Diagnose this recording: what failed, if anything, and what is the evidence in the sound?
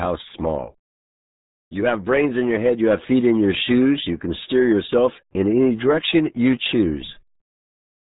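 The failure is at the codec stage. The speech has been through the RealAudio 14.4 codec, and the damage is heavy from start to finish. Nothing above 3.8 kHz survives, so the speech is dull and muffled. Consonants lose their edge. Vowels take on a gargly, bubbling texture. That points to a very low bitrate, roughly 8 kbit/s. The encoder keeps only a crude model of each short frame and rebuilds the sound from too few bits.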